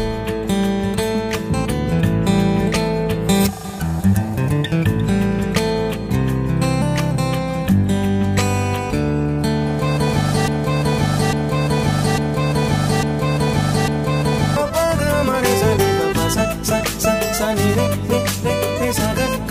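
The audio has a broken-record loop from 10.48 s to 14.57 s: a fragment of about 850 ms repeats exactly, back to back, five times. The likely cause is a stalled player, encoder or stream resending its last buffered fragment, so the audio that should have played there is lost.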